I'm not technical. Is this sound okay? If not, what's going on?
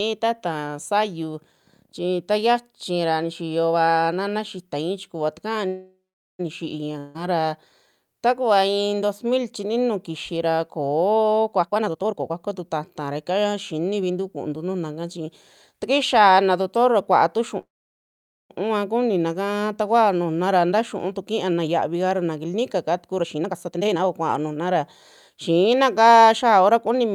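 No. This speech has three kinds of fault.

There are two call audio freezes. The first runs from 5.67 to 6.41 s. The sound stretches into a fading buzz, then goes quiet for about 0.4 s. The second runs from 17.61 to 18.52 s, after "naa doctor kuaa tu" and before "kuninaka takuao nujuna". It is almost all silence, nearly 0.9 s. The likely cause is delayed network packets. Nothing is lost. The speech simply resumes where it stopped.

There is one long network dropout, from 6.98 to 7.17 s. The sound briefly smears into a fading hiss. When it returns, about 0.16 s of speech has been skipped and never comes back. This is likely a stretch of audio that never arrived.

There are four jitter buffer speed-ups. In each one, the speech runs faster but the pitch stays the same. The player is trimming tiny slices of sound to catch up after a delay.
11.62 to 14.10 s: 129% speed, roughly 0.7 s trimmed. 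It sounds hurried.
20.48 to 22.25 s: 107% speed, just after "kuninaka takuao nujuna".
23.21 to 24.76 s: 144% speed, roughly 0.7 s trimmed. This is the most rushed part.
25.30 to 25.72 s: 112% speed. This one is brief.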